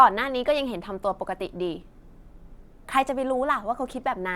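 Speech clip with lost LE Audio frames: a 20 ms noisy smear at 1.96–1.98 s and a 10 ms one at 3.92 s. The LC3 decoder filled each gap by reusing the last spectrum with random signs, which fits two frames and then one frame going missing.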